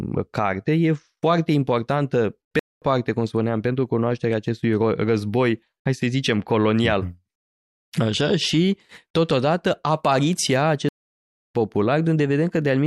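The speech cuts to silence at 2.59 s for about 0.22 s, then again at 10.89 s for about 0.66 s before resuming. These are playback stalls, likely the player running out of buffered data or its thread being blocked.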